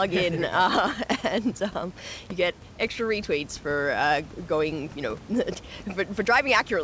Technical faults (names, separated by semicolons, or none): none